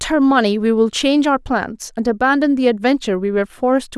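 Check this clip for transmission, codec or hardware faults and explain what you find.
Nothing wrong turns up here; the speech comes through steady and whole, with no dropouts, glitches or other faults to point to.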